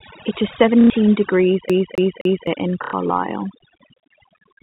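A speech recording carrying overdone noise removal from start to finish. The suppressor has pushed individual frequency bands down to nothing wherever they came close to its noise estimate, so the pauses fall to near silence dotted with twinkling specks, and quieter parts of the voice are gated away with the noise. On a spectrogram this shows as a patchy, moth-eaten texture with isolated bright dots scattered across the gaps. Packet loss with the last packet repeated hits twice, at 0.81 to 0.90 s and again at 2.84 to 2.93 s. Each gap is 90 ms, which fits three 30 ms packets, and the receiver keeps replaying the last one it got. The run has a short robotic buzz near 33 Hz. The waveform shows a block copied end to end with small discontinuities at each joint. Between 1.69 and 2.47 s the audio sounds like a CD stuck on one turn. The same 260 ms slice plays three times, with a brief mute at every jump back, giving the quick, evenly spaced stutter of a skipping disc. 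In the waveform that is an identical shape tiled three times with tiny flat gaps between copies, and on a spectrogram the same pattern is stamped out in a row. The whole clip passes through G.711 telephone coding, so the spectrum stops sharply at 4 kHz, with at most a faint level-following hiss from that stage.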